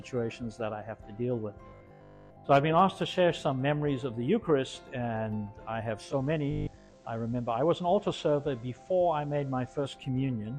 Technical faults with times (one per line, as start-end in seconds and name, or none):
1.68-2.44 robotic sound from repeated short buffers
5.98-9.97 digital radio blending to analogue
6.51-6.97 robotic sound from repeated short buffers